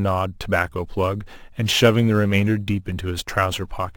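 Right from the start and all the way through, the speech carries imaging from sample-and-hold upsampling. It sounds like it began at 24 kHz and was brought up to 44.1 kHz by just repeating each sample, with no smoothing filter. That leaves a mirrored copy of the spectrum folded into the 12 to 24 kHz band, sitting about 23 dB below the signal. You hear it as a bright, metallic fizz riding on top of the speech, rising and falling with it.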